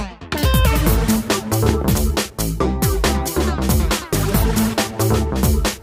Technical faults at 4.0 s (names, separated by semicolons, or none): none